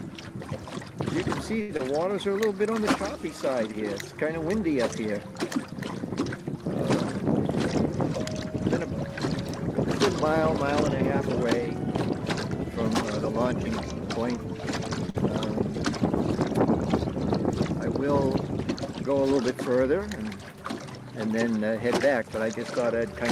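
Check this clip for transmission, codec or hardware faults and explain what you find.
Three kinds of network fault turn up, from about 1.6 s onward through the clip.

At 1.61 to 1.71 s a sound is held unnaturally long, about 77 ms. This is a short stall from a late packet: the jitter buffer ran dry, so the receiver stretched the last sound until the packet arrived, adding that delay.

At 1.77 to 1.81 s and again at 15.10 to 15.16 s there are brief smears where the sound wobbles. This is short concealed packet loss: about 20 ms and then 60 ms never arrived, and the receiver filled the gaps by continuing the preceding sound.

From 19.09 to 19.71 s the audio runs about 8% fast at unchanged pitch and sounds hurried. This is a jitter buffer speed-up, where the receiver trimmed short pitch-period slices, roughly 50 ms in total, to reduce its backlog.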